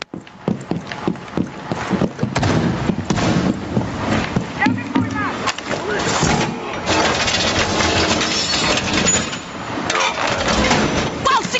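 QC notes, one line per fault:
Throughout: gain pumping. The level swings by around 20 dB. Loud and soft passages end up close in level, so the sound is squashed and breathes. The likely cause is input gain set far too high, with a fast limiter or compressor pulling it down on each peak and letting go between them. Nothing sounds above 8 kHz, as expected on this call path.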